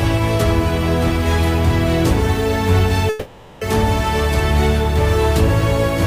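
The audio breaks up between 3.09 and 3.63 s with what is likely a long network dropout: for about 520 ms nothing new is heard, and the receiver fills the whole gap by stretching the last sound into a buzzy, hissy continuation that fades without ever reaching full silence. The audio then resumes with that half-second missing. On a spectrogram the span shows smeared, repeated texture losing energy; the waveform shows a decaying, patterned block before normal detail returns.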